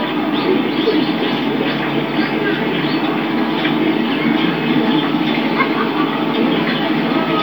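Nothing stood out on listening to these sounds.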